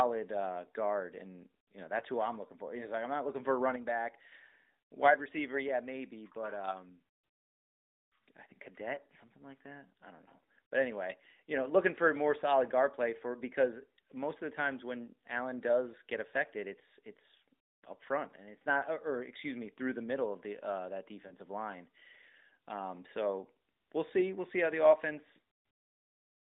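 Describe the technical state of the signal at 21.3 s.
A lost AMR speech frame hits the speech between 21.28 and 21.32 s: one corrupted 20 ms frame failed its checksum, so the decoder repeated the previous pitch and vocal tract settings at reduced gain. The result is a brief dip or warble, within narrowband 200 Hz to 3.7 kHz audio.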